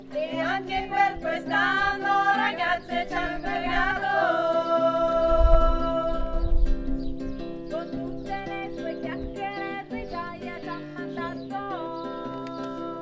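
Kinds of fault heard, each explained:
No technical faults can be heard in this audio.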